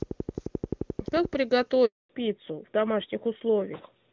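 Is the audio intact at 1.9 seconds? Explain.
No. At 1.9 s the speech falls into a handover gap running from 1.85 to 2.09 s, about 240 ms, while the call switched networks and no speech frames arrived. The speech fades within a few tens of milliseconds into true silence, rather than the buzzy repeated or smeared sound that loss concealment would produce.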